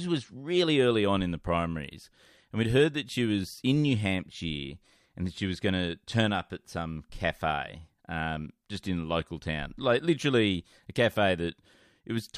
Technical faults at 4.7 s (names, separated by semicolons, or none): none